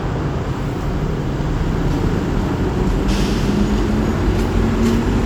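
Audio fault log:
No faults detected in this recording of sounds.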